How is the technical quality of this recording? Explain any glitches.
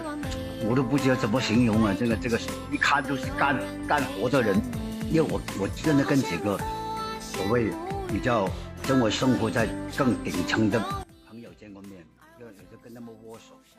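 From 11.03 s to the end at 13.78 s the level drops by about 20 dB and the sound turns faint. The likely cause is one channel inverted: with one stereo side in reversed polarity, the content common to both sides cancels when summed to mono, leaving only the faint difference between the channels.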